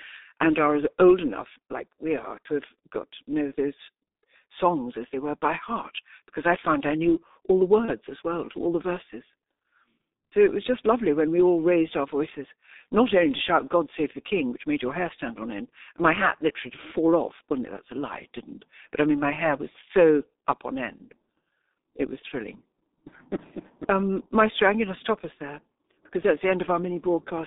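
Speech throughout carries heavy G.723.1 codec damage. The line is confined to roughly 250 Hz to 3.7 kHz, and the coarse 30 ms frame modelling, consistent with a 6.3 kbit/s mode, leaves the voice muffled and hoarse with smeared consonants. From 7.85 to 7.91 s, between "I knew all the" and "as well to all", VoIP packet loss concealed by the speech codec replaces the gap with a stretched continuation of the previous frame that fades out. The gap fits a single lost 30 ms frame, and the decoder takes a moment to recover after it.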